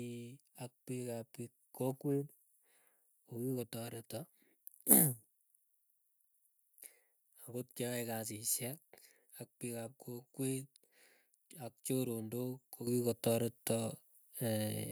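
At 12.87 s the microphone volume is stepped up: the calling software judged the input too quiet and raised the device's capture level in a single jump of about 9 dB. Speech and room noise both become louder at the same instant. A speaker leaning toward the microphone would lift the voice more than the background, and a gradual gain control would ramp. Here the change is instant, and the background rises by the same amount as the voice.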